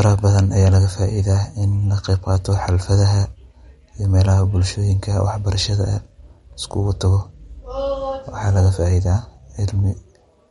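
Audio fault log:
Throughout, MP3 compression: the encoder likely ran short of bits, consistent with a low rate near 48 kbps, so it dropped all content above 11.2 kHz and discarded quieter frequency lines that then flicker in and out between frames. The speech therefore sounds dull at the top, with a plainly audible watery, swirling texture, metallic chirping on s sounds, and consonant onsets that smear rather than landing crisply.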